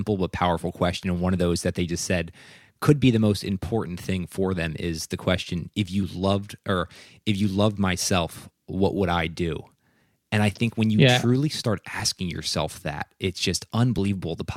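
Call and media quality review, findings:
Overlap between stream segments: short clicks or micro-skips in the speech at 2.05, 4.04, 6.03 and 13.98 s. Spacing of about 2 s matches 2.0 s segments. Segmenter or player timestamps overlap at the joins, so the player trims a few milliseconds of real audio and the waveform jumps. Unlike packet-loss dropouts, there is no gap or fill, only an abrupt splice locked to segment boundaries.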